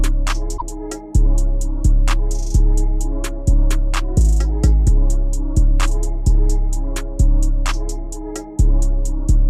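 Right near the start, from about 0.54 to 0.62 s, there's a short burst of damaged data in a compressed stream. Some bytes in the encoded stream are corrupt, so the decoder loses sync and has to hunt for the next frame header, and you get a quick glitch instead of the real sound.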